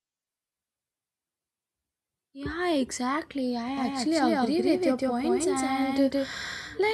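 A doubled audio track enters abruptly at 3.77 s and runs to the end of the clip. From that point the speech is heard twice, with a second copy trailing roughly 150 ms behind at about the same level as the original. The copy is full-band and dry, with no decay or room colour, so it is likely a second capture through a slower path mixed in alongside the first.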